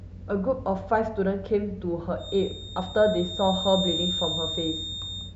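From 2.16 s to the end of the speech, a feedback whistle sits at 3.7 kHz, only a few decibels below the voice, thin and steady in pitch, slowly swelling and fading in level. Likely a loudspeaker-to-microphone loop held just short of runaway, it shows as a narrow horizontal spectrogram line.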